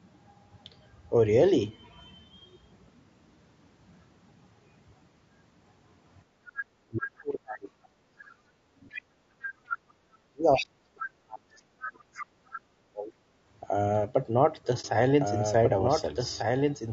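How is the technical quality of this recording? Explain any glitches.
Technically it's in rough shape. The codec damages the speech throughout, and the middle section has a cluster of echo-canceller problems. Near the end there's a dropout, and then a second copy of the audio joins in.

Low-delay AAC compression runs through the whole clip, and the damage is plainly audible. The speech sounds rough and grainy, with noise filling the gaps between harmonics and a top end that feels thinned or synthetic. The short frames used for low delay can't resolve pitch harmonics cleanly, and at these low bitrates there aren't enough bits to cover the loss. The sound points to AAC-ELD at a bitrate around 32 kbps, likely a video-call codec.

Background gated by the echo canceller shows up twice, from 6.24 to 6.58 s and from 9.78 to 9.99 s. The room sound ducks by about 16 dB and about 19 dB, then comes straight back. 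The canceller clamped the mic while the far end was playing through the loudspeaker and let go once it stopped. You hear it as brief hollow pockets in the background, each well under half a second long.

Speech suppressed in double talk is the worst of it. It covers 6.86 to 8.99 s and 10.27 to 13.16 s. The talker's voice dips very deeply, roughly 40 dB at worst. The likely cause is both sides talking at once. The canceller couldn't separate the near talker from the loudspeaker echo, so it turned everything down. Over those stretches a good chunk of the speech is effectively missing.

The other side's voice leaking through turns up four times: 8.90 to 9.02 s, 9.68 to 9.77 s, 10.56 to 10.66 s and 12.15 to 12.59 s. It sits roughly 10 to 15 dB below the main talker. These sound like short scraps of a second voice. That's most likely the far end playing on the talker's loudspeaker, with the canceller failing to scrub all of it out of the mic feed.

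AAC frame loss with muting happens from 14.81 to 14.85 s. There's a brief dip of about 30 ms. A single frame's worth of data went missing, and the decoder zeroed its spectrum. The overlapping windows fade the sound out and back in, which is why the edges are smooth. It's brief.

A doubled audio track starts abruptly at 15.21 s and runs to the end. A full-band copy of the audio trails about 1.5 s behind, roughly 5 dB quieter, with no decay and no room colour. It isn't a real acoustic echo. It's likely the same signal mixed in twice, either from a second, slower capture path or from an edit holding two misaligned copies. The result is a clean, delayed duplicate talking over the original.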